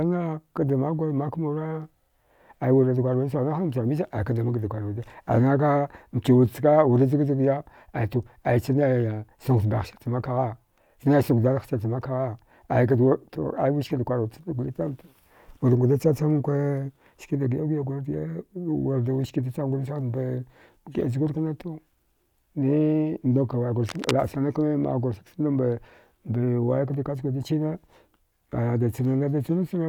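Cable scratch noise appears from 23.88 to 24.12 s, a quarter-second burst of dense, ragged scratching laid over the speech at roughly 10 dB below it. It is likely a worn cable or connector being moved, its contact resistance fluctuating rapidly.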